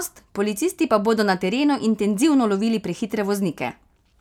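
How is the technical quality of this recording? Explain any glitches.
The technical quality of the recording holds up, with no glitches to explain.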